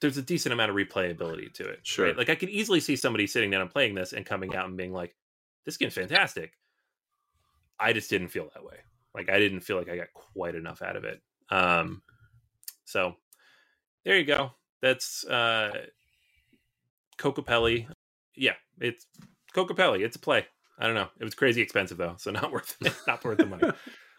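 Corrupt frames decoded: damaged compressed frames were played anyway, throwing energy to wrong frequencies as brief speech chirps and noise bursts at 3.00, 4.49 (after "and playing this and"), 6.04 (after "being like this game's", longest and loudest), 9.19, 14.34 (after "there you", also loud), 15.67 (faint) and 23.60 s.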